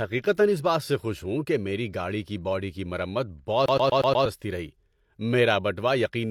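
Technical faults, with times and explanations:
3.66–4.26 s, CD stuck on one turn: right after "کی باڈی کی مرمت" the speech locks into a loop, replaying the same 0.12 s fragment five times with a brief mute at each restart. A scratch on the disc knocks the laser back one track at the same point of every rotation, so the player keeps rereading that short stretch and produces the quick, even stutter of a skipping CD before playback moves on.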